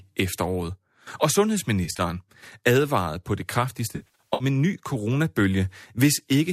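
From 1.85 to 2.01 s, and again from 3.96 to 4.44 s, AAC frame loss with concealment leaves smeared, phasey patches. The decoder fills short runs of missing frames from the last good spectrum. Unlike a hard dropout, the audio never falls to clean silence. The light, likely low-delay AAC coding leaves only light coding damage between the losses.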